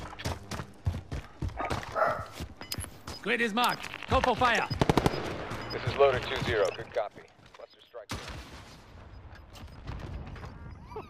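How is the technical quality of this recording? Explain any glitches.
Nothing in this recording stands out as a glitch, so there's nothing to explain.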